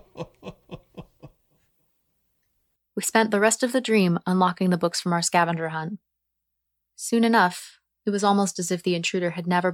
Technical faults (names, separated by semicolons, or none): clock slip clicks